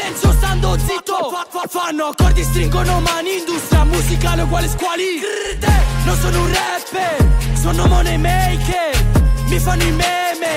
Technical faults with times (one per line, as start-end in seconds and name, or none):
0.11-10.48 word clock ticks